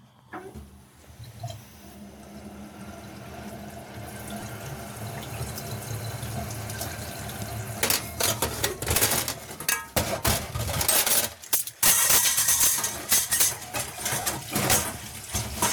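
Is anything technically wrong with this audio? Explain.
Yes, there are two distinct faults: dropouts in a Bluetooth LE Audio link and integer overflow on loud passages.

Lost LE Audio frames occur at 4.40 to 4.43 s (22.5 ms), at 11.89 s (7.5 ms), and at 14.21 to 14.26 s (45 ms). The lengths fit whole 7.5 ms LC3 frames. When frames went missing, the decoder filled the gaps by repeating the last spectrum with randomised phase signs. Each gap therefore sounds like a brief noisy smear rather than a clean silence. In the longest gap, near 14.2 s, the concealment starts to fade towards silence.

Integer overflow appears at 7.83 to 9.04 s (about 3 dB over the limit), 10.81 to 12.67 s (about 6 dB over), 13.12 to 13.44 s (about 6 dB over), and 14.70 to 14.75 s (about 3 dB over). Peaks above full scale wrapped around to the opposite extreme instead of being limited. The result is sharp, violent cracks on loud moments, far harsher than ordinary clipping. 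They are denser in the 6 dB sections.

The light lossy-compression coloration in the recording is separate from these faults.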